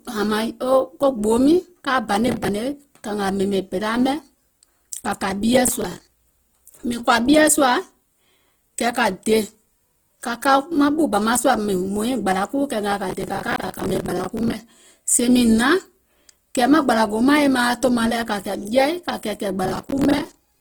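Throughout the speech there is a grainy, rough texture, with tones breaking into noisy fizz. The top of the spectrum still extends to about 20.1 kHz, so nothing sounds muffled. This fits Opus compression in its CELT music mode at a low rate, likely around 16 kbps. Short of bits, the encoder keeps each band's energy but fills the detail with folded or noise content, so the speech turns coarse instead of dull.

Processor overload crackle appears in four bursts: from 2.28 to 2.49 s, from 5.68 to 6.26 s, from 13.10 to 14.54 s just before "sèè mìŋ", and from 19.64 to 20.49 s right after "kȧ kɛ̀ɛ̀kɛ̀ɛ̀". Each is a gritty, tearing crackle laid over the speech, longest in the third burst. The processor is missing deadlines on small buffers of roughly 10 ms. Each missed buffer is filled with stale audio, and the hard edges between these fragments pile up into crackle until the load eases.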